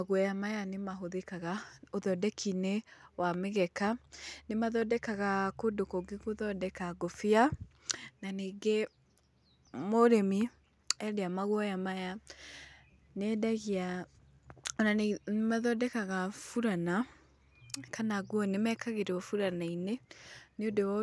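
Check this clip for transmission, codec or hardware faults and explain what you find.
Nothing stood out on listening that would point to a transmission, codec or hardware problem in this recording.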